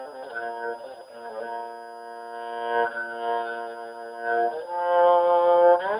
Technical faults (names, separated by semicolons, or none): switching supply whistle